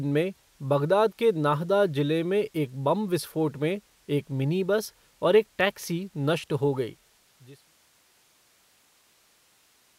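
The speech signal shows no technical faults, and its closing smooth fade eases the level down from around six and a half seconds to silence by 7.8 s without any click or hard edge.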